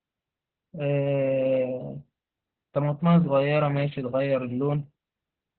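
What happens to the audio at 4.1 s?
Opus voice compression, present throughout and so at 4.1 s: SILK coding at 8 kbps leaves nothing above 4.3 kHz, making the speech muffled, hoarse and slightly robotic.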